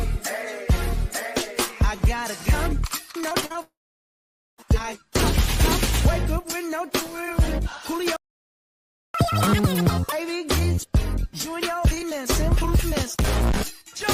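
From 3.21 to 3.56 s there is repeated packet loss, and the sound turns robotic. Short holes come one after another, six of them, the longest 41 ms. Each hole is filled by stretching the last bit of sound. The patches cover about a third of this stretch. So the audio sounds choppy and metallic, with small pieces missing.

At 3.62 s the sound breaks off again, until 4.60 s. This is most likely a long network dropout. Nearly a second of audio never arrives. The gap starts with a brief smear of the last sound, held and fading. Then about 0.85 s of silence follows. When the audio returns, it has skipped ahead. The missing part is simply gone.

At 8.16 s the output stops dead in mid-flow. It stays silent for about 0.98 s, until 9.14 s. This sounds like a playback stall. The player most likely ran out of data, or its thread was held up. Nothing plays during the gap. Then the sound picks up again.

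Right after the stall, from 9.14 to 10.12 s, comes catch-up at higher speed. The player works through its backlog at double speed by resampling. Everything runs twice as fast. The pitch jumps by roughly ten semitones, giving a chipmunk-like quality. After about a second the lost time is made up. Speed and pitch then drop back to normal.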